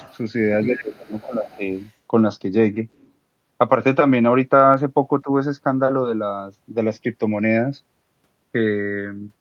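A short speech recording with a steady case of channels drifting apart: the two sides sound like slightly mismatched clocks, off by around 100 ppm, with the inter-channel delay creeping to under a millisecond by the end. Summed to mono, this gives a slow flanging, seen on a spectrogram as comb notches gliding gradually through the spectrum. The other side's voice leaking through appears as scraps at 0.0 to 0.17 s, 0.64 to 0.85 s, 1.06 to 1.57 s, 1.75 to 1.91 s and 2.96 to 3.11 s, ranging from about 15 dB to about 40 dB below the speech. This is likely loudspeaker playback that the echo canceller failed to remove, and it shows as weak harmonic traces underneath the main voice. Speech suppressed in double talk pulls the talker down by up to about 20 dB in pieces between 0.68 and 1.64 s, overlapping the leakage, and dips briefly by about 10 dB at 5.24 to 5.29 s. The waveform envelope sags there. 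Dropped samples produce one sharp click at 4.74 s, likely just a couple of samples missing, visible as a single thin vertical line on the spectrogram and a tiny step in the waveform.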